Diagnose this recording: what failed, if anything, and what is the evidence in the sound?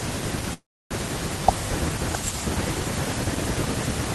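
The network stage stalled: packets were likely held up in transit, so the call's jitter buffer ran dry at 0.53 s. The result is a call audio freeze lasting until 0.93 s. The receiver stretches the last fragment of speech into a short fading buzz, then falls to about 0.3 s of silence. When packets resume, speech continues where it stopped, so nothing is lost. A gap of roughly 0.37 s has been inserted, delaying everything after it.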